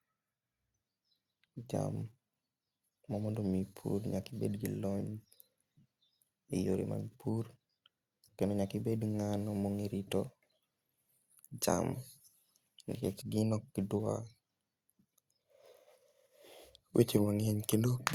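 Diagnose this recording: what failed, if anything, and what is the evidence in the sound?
Nothing failed here: I listened to the whole speech recording and found nothing at any stage of the chain that needs a diagnosis.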